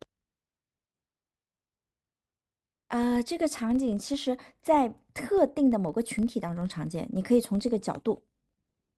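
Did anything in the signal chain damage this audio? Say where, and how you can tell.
Yes: the filter is restarted on every block throughout, at the buffer stage. Resetting each block to silence gives a level-following 23.4 Hz buzz, which fits 2048-sample blocks.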